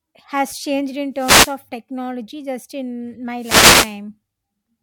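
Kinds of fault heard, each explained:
Wireless microphone noise hit: the FM radio link fades as reflected signals cancel, so receiver hiss surges, heard here as two static swishes, after "has changed in" and following "technology just in", appearing on a spectrogram as broadband noise bands filling the gaps between speech harmonics.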